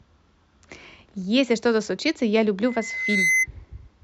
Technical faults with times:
2.65-3.47 loudspeaker feedback squeal

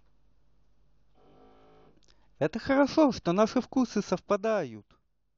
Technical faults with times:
none

